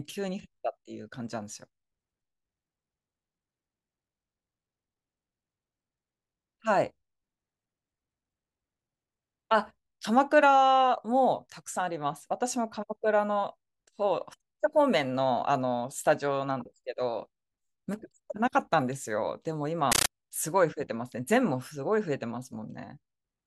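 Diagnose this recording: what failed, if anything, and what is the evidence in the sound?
Speech gives way, from 19.92 to 20.09 s, to a very loud, harsh chatter of static: short bursts of noise about 13.3 ms long, each followed by silence, repeating 31.25 times a second. That is a compressed stream played as audio, a failure at the playback stage. A Dolby Digital bitstream crossing the digital link was treated as ordinary samples instead of being decoded. The burst pattern points to AC-3 frames, consistent with a 640 kbps stream.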